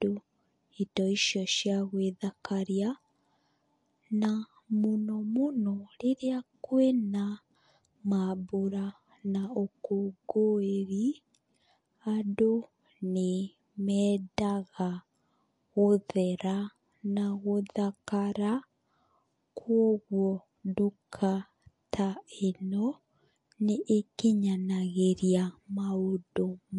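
From the first second to the end, the speech has a watery, plainly swirly quality, and nothing comes through above 11.3 kHz, so the top end sounds cut flat. That's most likely MP3 compression at a low bitrate, something in the region of 48 kbps. Short of bits, the encoder has lopped off the treble at a fixed point and dropped quieter frequency detail that flickers in and out between frames, which is where the swirl comes from.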